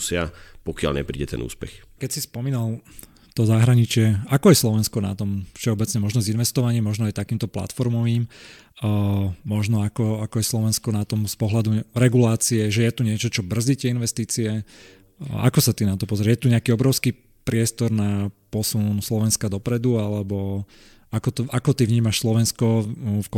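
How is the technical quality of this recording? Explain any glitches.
No technical glitches can be heard anywhere in the recording. There is nothing in the sound that needs explaining.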